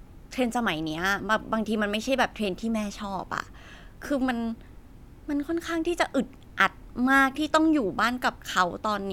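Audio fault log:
No technical faults can be heard anywhere in the speech, which holds a steady, continuous signal with no interruptions or level disturbances.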